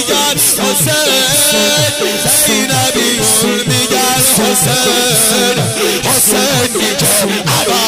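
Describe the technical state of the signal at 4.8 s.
At 4.8 s the signal is intact, with no audible fault at that moment.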